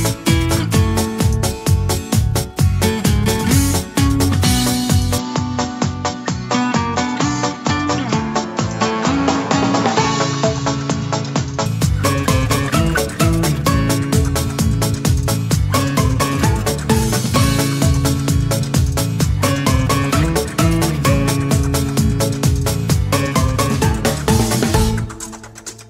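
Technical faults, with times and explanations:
5.18–11.66 s, input switched to a poorer device: sound dulls abruptly, with nothing above 7.6 kHz and a new noise floor roughly 30 dB down. This is likely a change of microphone. The spectrogram shows a sharp ceiling over that span, while the waveform shows no gap or level jump.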